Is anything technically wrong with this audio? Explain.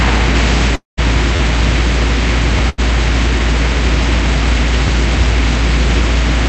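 Yes. There are three kinds of fault, all heard through a call path whose Opus coding limits the audio to about 8 kHz.

Long network dropout, 0.75 to 0.99 s: the last sound is stretched into a fading buzz or hiss, then about 150 ms of near silence follows. Audio resumes with roughly 0.22 s missing, most likely because no packets arrived for that stretch.

Repeated buffer, at 1.36 to 1.39 s, 2.58 s and 4.87 s: when fresh audio did not arrive in time, the device replayed its last 11.6 ms block, which fits a 512-sample buffer. At 1.36 s it repeats three extra times and is heard as a short stutter. The other two repeat once each and come across as a click or brief buzz.

Burst of packet loss, 2.69 to 2.80 s: consecutive packets went missing. The receiver bridged about 85 ms by extending the preceding sound as a held buzz or fading hiss, then resumed further on with about 80 ms of audio gone.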